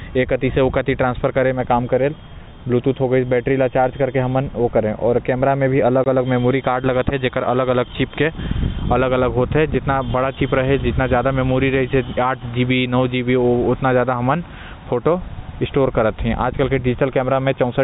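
At 6.04 to 6.06 s the speech drops out for 20 ms: packet loss filled with silence. The receiver inserted digital silence where audio was missing, so the gap has hard edges. The length fits two lost 10 ms packets on this G.711 telephone path.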